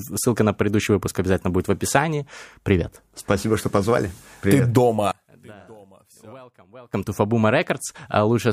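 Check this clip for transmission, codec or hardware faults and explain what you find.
One fault is present: a stretch where the speech nearly disappears.

From 5.11 to 6.93 s the level drops by about 26 dB, leaving only a faint residue of the speech. The likely cause is one channel inverted. When the two stereo channels are summed to mono, the speech that is common to both cancels, and only their small difference survives. On the waveform the envelope collapses to a narrow band for that span. The spectrogram shows the low and mid energy almost vanishing, with weak traces left until full level returns at 6.93 s.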